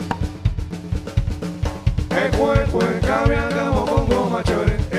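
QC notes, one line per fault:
Nothing stood out on listening.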